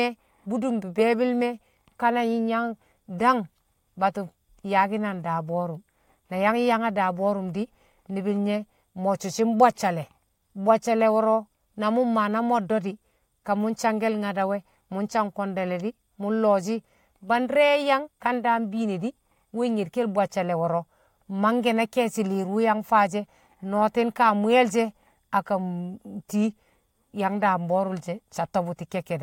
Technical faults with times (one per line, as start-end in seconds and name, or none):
none